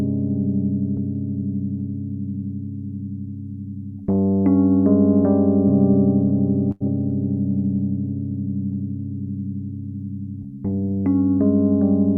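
A packet arrived late at 6.71 s, emptying the jitter buffer: a short stall from a late packet, with the sound held about 91 ms, until 6.82 s, then resuming intact.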